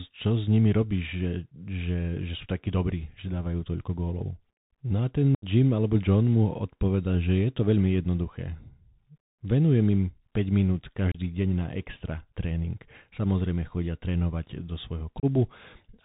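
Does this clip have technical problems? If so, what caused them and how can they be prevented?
Yes. The whole recording runs through a Bluetooth CVSD headset codec, the narrowband link headsets use for calls. It sends one up-or-down bit per sample and adapts its step size, so nothing above 4 kHz survives. Here the damage is plainly audible: s sounds come out scratchy, loud bright moments distort where the step can't keep up, and a grainy hiss sits under the speech. The sound fits a 64 kbps CVSD stream. To prevent it, record over a wideband link such as mSBC or LC3, or use a wired microphone.

There is also unconcealed Bluetooth headset packet loss in three places, where short voice packets between headset and phone never arrived and were replaced with silence or an idle pattern instead of being patched over. The longest gap, about 75 ms at 5.35–5.45 s, suggests around ten packets lost. 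Two shorter gaps of about 30 ms follow: one at 11.12–11.18 s, just before "deň na extra tréning", and one at 15.20–15.25 s, right after "chodia trénovať do". Each leaves an abrupt hole with hard edges. Keeping the phone close to the headset and clear of other 2.4 GHz traffic would prevent these dropouts.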